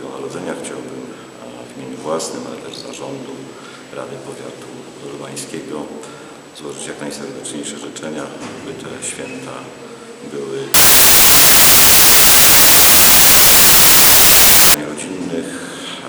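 From 10.74 s to 14.74 s the audio turns into loud, harsh broadband noise: samples built from the wrong bytes. For those four seconds the reader combines each sample's bytes wrongly, through a one-byte offset, swapped byte order or a mismatched alignment, so the rapidly changing low bits end up as the dominant part of each value. Unlike clipping or heavy distortion, which still follow the original sound, this is broadband noise.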